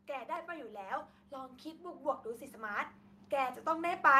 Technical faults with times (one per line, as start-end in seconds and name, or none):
0.06-4.19 automatic gain rising